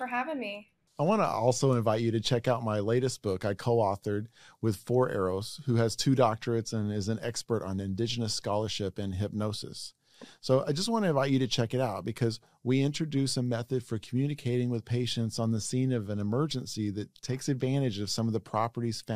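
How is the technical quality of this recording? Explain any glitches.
No glitches or dropouts can be heard anywhere in the recording, so there is nothing to explain.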